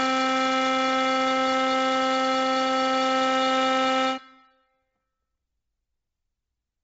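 From the start of this music clip to its end, the sound carries what is likely Bluetooth LC3 compression, applied heavily. Nothing survives above about 7.8 kHz, and the upper band that remains is thinned out and partly noise-filled, so the music takes on a breathy, grainy edge rather than clean treble. The damage is consistent with a low bitrate near 24 kbps and short 7.5 ms frames. A spectrogram would show a hard ceiling near 7.8 kHz with speckled, patchy energy beneath it, while the waveform looks largely normal.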